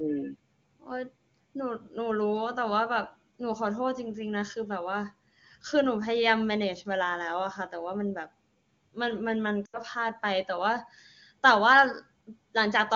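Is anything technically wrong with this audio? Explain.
Yes. From 9.65 to 9.78 s there are lost AMR speech frames. About 80 ms of audio is missing, which fits four consecutive 20 ms frames failing their checksum. The wideband decoder reuses the last good pitch and vocal tract settings at falling gain, so the sound smears and quickly fades.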